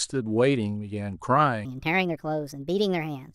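From 1.65 s to the end at 3.35 s, the playback or editing clock has likely been mismatched to the recording, producing a section at the wrong speed. The speech runs 1.38 times faster than it was captured, and because speed and pitch move together, the voice jumps up by about five semitones at the switch point. That last stretch sounds abruptly hurried and thin, with a chipmunk-like lift against the normal first half.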